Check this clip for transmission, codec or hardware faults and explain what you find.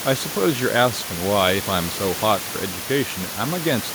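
No transmission, codec or hardware faults.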